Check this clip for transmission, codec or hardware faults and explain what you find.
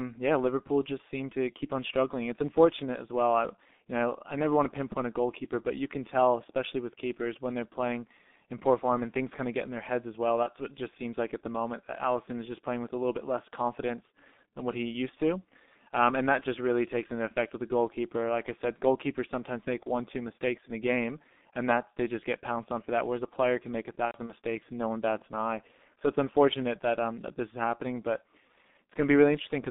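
Two faults are audible: a low-bitrate codec throughout and two packet-loss dropouts.

Throughout, a G.723.1 codec leaves the speech muffled and hoarse, with blurred consonants. Its slow 30 ms-frame voice model, at a rate that fits about 6 kbit/s, leaves a spectrogram empty outside 200 Hz to 3.6 kHz.

From 10.43 to 10.49 s and from 24.06 to 24.32 s, VoIP packet loss concealed by the speech codec makes the decoder extend its last pitch and filter, lowering the gain frame by frame. The first gap is about 30 ms. The second scatters about 120 ms of loss over 240 ms, with the longest run 90 ms. The waveform shows a repeating, shrinking envelope, and the spectrogram shows smeared harmonics.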